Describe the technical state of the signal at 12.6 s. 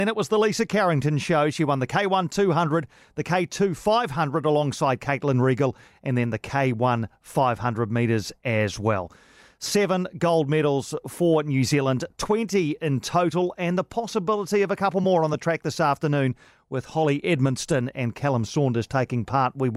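At 12.6 s you're in the 11.0 to 13.5 s stretch after "gold medals" where the resampler restarted on every block. Each 250 ms chunk went from 48 kHz to 44.1 kHz on its own, so its edges come out slightly wrong, leaving a steady 4 Hz tick under the speech.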